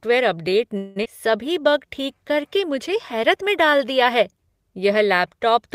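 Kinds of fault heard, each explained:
Call audio freeze: From 0.77 to 0.98 s the sound stops progressing and the last fragment is stretched into a fading buzz for about 184 ms, with no drop to silence. Playback then resumes exactly where it left off, so nothing is lost and the rest of the audio sits about 184 ms later. This is likely a stall in packet delivery that drained the jitter buffer, leaving the receiver to extrapolate until data arrived.
Skip ahead: Just after the freeze, at 1.04 to 1.07 s, playback jumps forward. Roughly 150 ms of sound is missing, and the two sides are bridged by only a very short fill of about 13 ms, so the join is nearly direct. This is consistent with the receiver discarding a backlog of queued audio to recover the delay added by the preceding stall, pulling the timeline back by about 150 ms.
Jitter buffer slow-down: Between 1.28 and 3.86 s the audio runs at about 94% speed with unchanged pitch, adding about 148 ms in total. 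The receiver achieves this by repeating individual pitch periods and short slices of pauses many times over, so sustained sounds become drawn out. The pattern indicates the buffer was running low or had just raised its target delay and was rebuilding its reserve gradually, rather than inserting one audible gap.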